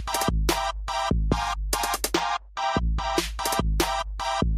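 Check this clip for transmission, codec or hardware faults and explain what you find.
One fault appears: channel delay (comb filtering) from 2.12 to 3.17 s. One channel lags by roughly a twentieth of a millisecond, which points to a delay of about two samples. Summed to mono, this cancels content near 10 kHz, so the top end dulls. It differs from a low-pass cut because the loss sits in a notch, not a steady roll-off.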